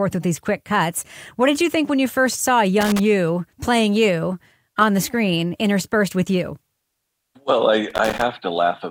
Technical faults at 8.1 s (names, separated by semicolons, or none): loose connector crackle